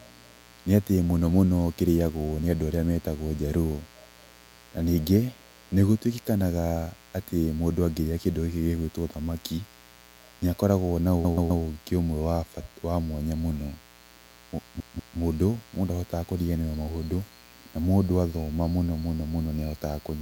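A mains buzz runs through the whole clip, roughly 30 dB below the speech. Sharp switching spikes from a 60 Hz supply leaked into the signal path. Their harmonics stack up into a steady, raspy buzz under everything.

Repeated frames appear from 11.25 to 11.63 s. A 128 ms block plays three extra times, adding 384 ms. The same compressed data was decoded again, so the speech stutters. From 14.80 to 15.18 s a 192 ms block repeats twice more, also adding 384 ms.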